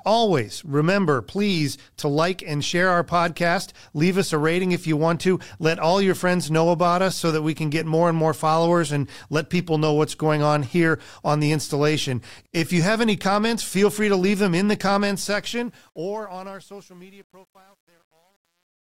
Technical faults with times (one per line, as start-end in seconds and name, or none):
15.18-18.93 truncation distortion on a fade